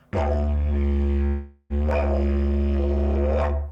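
A long network dropout runs from 1.27 to 1.73 s in this clip of everyday sound. For roughly 0.42 s the last sound is stretched into a buzzy, fading continuation instead of the real audio. That gap is filled throughout, with no drop to true silence. When the sound returns at 1.73 s, that stretch is simply missing. The likely cause is a run of audio packets failing to arrive, with the receiver concealing the gap by extrapolating what it last had.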